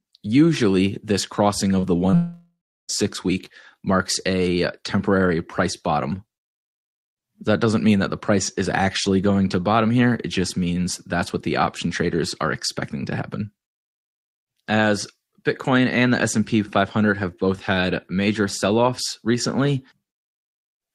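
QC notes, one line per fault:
1.79 to 1.85 s and 2.11 to 2.15 s, short concealed packet loss: about 40 ms and then 20 ms of sound never arrived in time and were patched by extending the preceding sound before blending back, heard as a brief smear or wobble rather than a gap.
2.15 to 2.91 s, long network dropout: roughly three quarters of a second of sound is missing. The last sound is stretched into a fading buzz or hiss before about a third of a second of silence, and the audio resumes with the lost stretch skipped. This is likely a network outage rather than a concealed loss, because the fill decays into silence and does not blend back.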